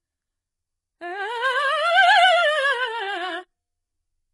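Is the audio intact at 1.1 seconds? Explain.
No. The music carries heavy damage from HE-AAC compression, present throughout the clip, including 1.1 s. The treble is rebuilt from copied lower bands, so it sounds gritty and metallic and stops near 11.5 kHz. That likely points to a very low bitrate, around 12 kbps.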